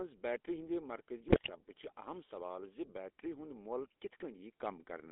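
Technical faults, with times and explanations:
throughout GSM full-rate codec: The speech passes through a 13 kbps GSM full-rate coder, which rebuilds the voice from a vocal-tract filter driven by sparse, regularly spaced pulses. That leaves a buzzy, gravelly roughness, with the line band narrowed to roughly 250 Hz to 3.6 kHz.
1.28 to 1.52 s GSM bit errors: Right after "بیٹری ہندِ", corrupted bits reach the decoder at a rate of about 3.5 percent, scrambling filter, pitch and gain parameters across a stretch that fits about ten damaged frames. The speech breaks into squawks, pops and gargling.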